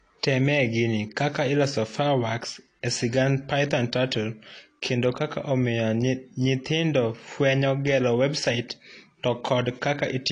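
Throughout the speech, the likely cause is AAC compression: an AAC-LC encoder starved of bits, consistent with a rate near 32 kbps, had to quantise its frequency lines coarsely and discard the top of the spectrum. Nothing is left above about 10.1 kHz, so the sound is dull and veiled. The damage is plainly audible, with a smeared, warbling texture on sustained sounds and a fizzy, unstable edge on sibilants.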